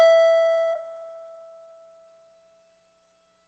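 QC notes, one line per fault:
0.73 s, skip ahead: about 0.7 s of the music is missing, and the two sides join almost directly, with no silent gap as a dropout would leave.
0.83–3.35 s, jitter buffer speed-up: the music runs 7% fast as short pitch-period pieces are removed, roughly 0.2 s in all. Pitch stays unchanged, unlike resampling.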